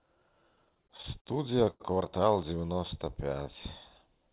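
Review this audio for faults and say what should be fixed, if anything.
Repeated stalls (stutter) run from 0.56 to 1.29 s: nine brief holds, the longest 50 ms, filling about 136 ms in all, roughly a fifth of that stretch. Late packets kept emptying the jitter buffer, so the receiver extended the last sound each time. On the waveform this shows as repeated, copy-like periodic segments; on the spectrogram, as smeared horizontal bands beneath the 4 kHz ceiling of the G.711 call path. A larger adaptive jitter buffer would absorb this.

A short stall from a late packet occurs from 1.70 to 1.83 s. The network delay jumped by 95 ms, the buffer ran dry, and the receiver stretched the preceding sound for 95 ms before resuming where it left off. It looks like one flattened, repeating waveform stretch and a frozen spectral slice. Faster buffer adaptation to delay jumps would prevent it.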